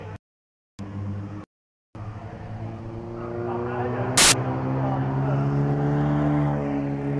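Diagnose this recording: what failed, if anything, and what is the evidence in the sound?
Storage or file parsing is the culprit here: at 4.18 to 4.32 s there's a hard-edged burst of very loud white noise lasting about 0.15 s. That's file tags played as audio, with the embedded cover picture's compressed data being decoded as if it were samples.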